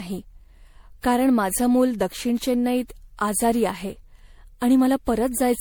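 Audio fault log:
Throughout: generation loss, likely from re-encoding the speech about seven times as 96 kbit/s MP3, so smeared, swirly, hollow tone and blurred attacks pile up.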